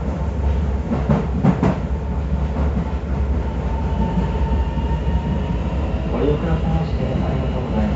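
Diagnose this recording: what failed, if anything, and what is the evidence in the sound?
Nothing stood out on listening, and there is no audible evidence of a failure at any stage of the chain.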